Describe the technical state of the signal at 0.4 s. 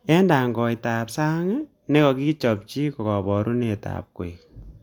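The signal at 0.4 s is intact, with no fault audible at that moment.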